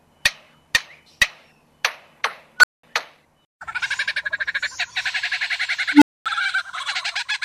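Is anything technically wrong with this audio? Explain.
Yes, an unstable filter: a recursive filter's feedback runs away, so a tone swells, clips and overflows into silence. This happens at 2.59 to 2.83 s, with a squeal near 1.5 kHz building over 46 ms and then 200 ms of silence, and at 5.93 to 6.26 s, with a tone near 300 Hz building over 84 ms and then 240 ms of silence.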